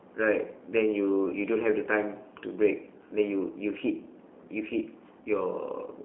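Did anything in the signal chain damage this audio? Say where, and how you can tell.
Yes. Throughout the speech there is a rough, slightly synthetic buzz, with a narrow band running from about 250 Hz to 3.4 kHz. That points to the G.729 codec at the codec stage, which fits an 8 kbit/s VoIP link rebuilding speech from a filter model and sparse pulses.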